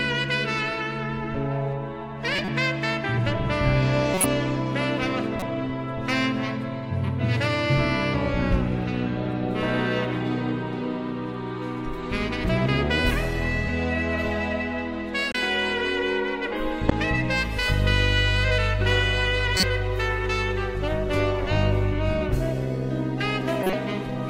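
Corrupt frames are decoded at 2.36, 4.14, 5.40, 15.32, 16.89, 19.57 and 23.60 s. Damaged data misplaces energy, giving brief chirps and noise bursts, some loud.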